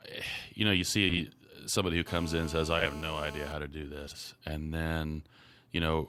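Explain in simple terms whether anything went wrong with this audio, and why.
Two things went wrong in this speech recording.

The first is frames out of order, heard four times: 1.09 to 1.19 s, 2.79 to 2.86 s, 4.07 to 4.18 s and 5.37 to 5.42 s. In each spot, two neighbouring chunks of audio, each roughly 20 to 40 ms long, were played in swapped order. You hear a quick garbled flutter. This differs from a dropout because nothing goes missing and the timing stays intact. The same sound is simply jumbled.

The second is GSM phone buzz, from 2.08 to 3.53 s. A nearby mobile phone on a call sent radio pulses about 217 times a second, and the recording circuit picked them up as sound. The result is a harsh, raspy buzz that stays nearly steady and has nothing to do with the voice. Unlike smooth mains hum at 50 or 60 Hz, it is higher and gritty, like an insect.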